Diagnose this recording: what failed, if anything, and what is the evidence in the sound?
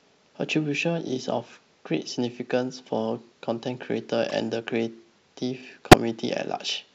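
The codec stage failed: corrupt frames were decoded, giving a moderate glitch at 4.29–4.33 s, about two frames long, and a near-full-scale glitch at 5.91–5.94 s. Flipped bits put energy at the wrong frequencies, unlike loss concealment, which mutes or smears the speech.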